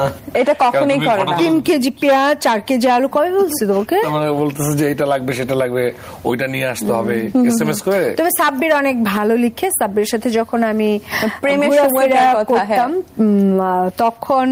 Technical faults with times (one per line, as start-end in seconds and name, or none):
0.00-14.52 gain pumping